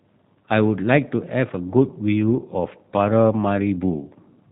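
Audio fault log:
throughout G.729 codec: speech stops at 4 kHz and sounds plainly rough and synthetic from pulse-modelled rebuilding, not mere band-limiting; fits an 8 kbit/s stream.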